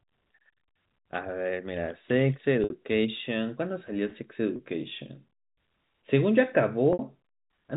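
Packet loss with pitch repetition strikes at 2.64 s and 6.93 s (60 ms each, fitting two lost packets) and at 4.56 s (30 ms). The receiver loops the last pitch period to fill each gap, so the speech briefly holds a buzzy tone within the G.711 telephone band; in the two 60 ms gaps it fades into silence before the speech returns with a short cross-fade.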